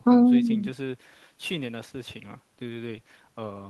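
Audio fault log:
No faults detected in the speech; nothing to log.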